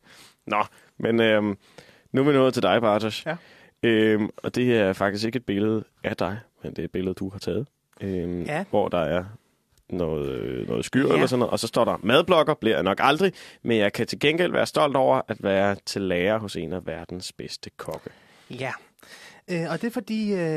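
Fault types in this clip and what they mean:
Overlap between stream segments: two segments' time stamps overlap at a boundary, and the overlapping stretch is trimmed, so about 17 ms of speech vanishes at 11.97 s, between "og så står der" and "madblokker bliver jeg nok". Unlike a dropout, no silence is inserted; the waveform jumps straight ahead, giving a tiny skip.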